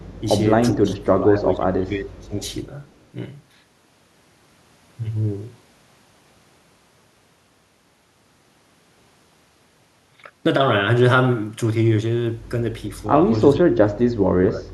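From 0.0 to 0.21 s there is an echo leak: a far-end echo canceller likely passed its loudspeaker pickup back, so a very faint copy of the speech returns 410 ms late. From 0.75 to 2.4 s, speech is suppressed in double talk: with both sides talking, the canceller likely turned down the talker along with the echo, and the speech dips in pieces by up to about 25 dB. At 2.89 to 3.05 s the echo leak returns, even fainter, again 410 ms behind. From 13.53 to 14.73 s the double-talk suppression recurs, with the speech cut deeper, by about 35 dB.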